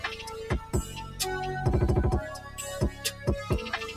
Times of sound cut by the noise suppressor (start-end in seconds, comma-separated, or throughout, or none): 0.65-1.19, 2.38-2.58, 2.91-3.27